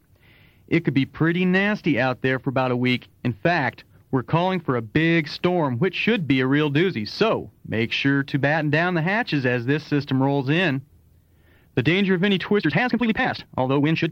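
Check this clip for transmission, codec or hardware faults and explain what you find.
One fault stands out: a time-stretched section near the end. From 12.56 s to the end of the clip at 14.12 s, the pace jumps abruptly to about 1.92 times normal speed. The pitch stays where it was. The likely cause is software squeezing this stretch to fit a shorter length, dropping short slices of audio to hold the pitch. The result sounds rushed, with a sudden acceleration at 12.56 s.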